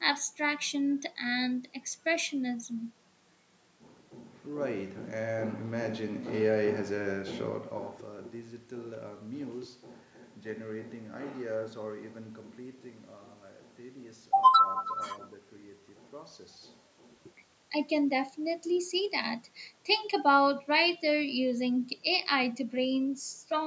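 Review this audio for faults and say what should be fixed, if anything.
Nothing needs fixing in this speech recording, since the gentle fader-style level moves and the call-style microphone processing with no content above 8 kHz are just how it was handled and aren't problems.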